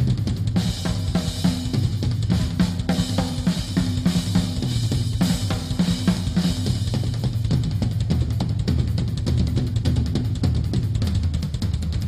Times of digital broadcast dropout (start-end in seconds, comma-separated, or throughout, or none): none